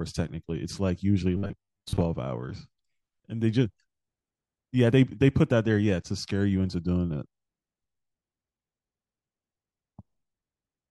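From 1.37 to 2.02 s the speech takes on robotic sound from repeated short buffers, likely from audio arriving too slowly so the last 10 ms is replayed in place of about half the real signal. That loop imposes a fixed 100 Hz buzz. Unlike a plain pitch shift, the metallic tone stays locked at one frequency while the speech underneath still roughly moves.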